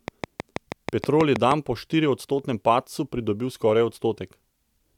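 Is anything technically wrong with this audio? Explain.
Yes. A train of clicks runs from 0.08 to 1.52 s, ending just before "po štiriodstotnem padcu": roughly ten same-shaped pulses at a regular 6.3 per second, peaking some 15 dB above the speech. The likely cause is interference or a faulty connection or power supply injecting repeated pulses. Their steady pacing and near-identical shape set them apart from random crackle or isolated dropout clicks.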